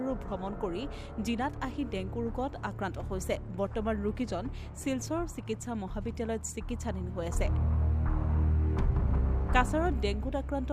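No technical faults turn up anywhere in the recording. Nothing breaks into the sound at any point.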